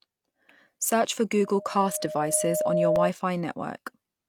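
Loudspeaker feedback squeal runs from 1.39 s to 3.11 s. The microphone is picking up the loudspeaker it drives, and at 615 Hz the loop gain passes one, so that tone feeds on itself. It swells over roughly a second and a half into a steady squeal that sits about 5 dB above the speech. It stops at 3.11 s once the loop is broken.

A repeated buffer occurs at 2.96 s, during the squeal. New audio failed to arrive in time, so the device played its last block again once. The repeated piece lasts 1.33 ms, which fits a 64-sample buffer. A block that short sounds as a brief click with a hard join, not an audible stutter, and it leaves the stream a millisecond or two behind.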